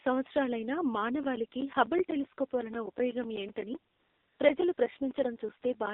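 From start to finish the speech carries the AMR narrowband mobile codec, with plainly audible damage. The passband runs from about 250 Hz to 3.7 kHz, so nothing of the upper spectrum survives and the low end is thin. The codec rebuilds speech from a vocal-tract model excited by a few pulses per subframe. Here that model is starved of bits, which fits the 7.4 kbps mode, and the result is a buzzy, synthetic texture throughout.

From 1.23 s to 5.87 s there are periodic USB or driver dropouts, spaced every 0.125 s. Each time, a background task stalls the audio path and roughly 10 ms of signal is replaced by silence. That regular rhythm comes to some forty short gaps across the span. They are heard as evenly spaced ticks laid over the speech, a mechanical pulse that is unrelated to the content.

AMR comfort noise fills 3.92 to 4.40 s, a 480 ms stretch, and again 4.74 to 4.78 s, lasting 40 ms. 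In both places the encoder judged the input silent and stopped sending speech frames. The receiver then generated noise from a coarse level and spectrum description. The real background is swapped for a smooth, steady hiss that switches in and out.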